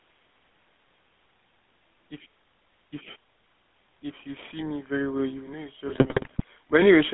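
Throughout, the speech passes through the GSM full-rate codec, which models the vocal tract and drives it with sparse, regularly spaced pulses at a rate that fits 13 kbps. The line keeps only about 200 Hz to 3.6 kHz, so the voice sounds thin, boxed-in, and plainly buzzy and gravelly.

From 5.88 to 6.44 s, GSM bit errors corrupt the decoder's filter, pitch and gain values across roughly 28 frames, at an error rate of about 2.35%. The spectrum lurches and the level jumps, and the voice breaks into squawks, pops and gargling.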